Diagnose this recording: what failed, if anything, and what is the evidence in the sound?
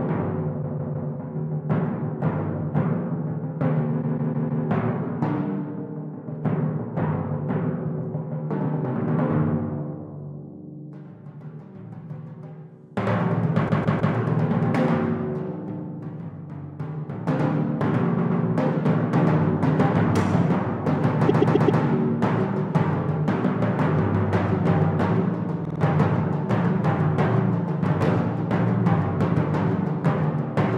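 Repeated frames at 0.62, 4.01, 13.68, 18.17, 21.28 and 25.64 s, in the codec or storage stage: a block of encoded audio (157 ms; 131 ms at 18.17 and 21.28 s; 52 ms at 25.64 s) replays two to four extra times, stuttering and lengthening the audio.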